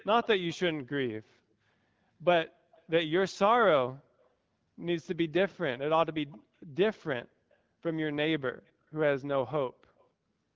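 Brief, faint echo leak surfaces at 0.0–0.06, 0.48–0.57, 2.76–2.83, 4.2–4.27, 6.31–6.38, 7.51–7.56 and 9.98–10.05 s: a quiet copy of the speech trailing by about 270 ms, likely from a loudspeaker echo canceller letting residue through. The fixed delay distinguishes it from room reverberation.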